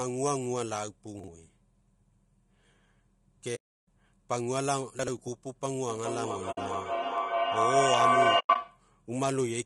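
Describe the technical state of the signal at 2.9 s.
At 2.9 s the speech carries low-delay AAC compression throughout the clip. It sounds rough and grainy, with noise between harmonics. Short frames at a low rate, likely AAC-ELD near 32 kbps, smear pitch detail.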